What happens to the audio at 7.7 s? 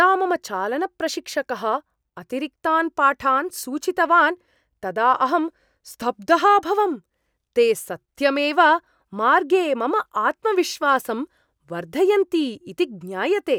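Nothing goes wrong at 7.7 s: the speech continues intact through that moment, with no dropout, click, distortion or other fault to be heard.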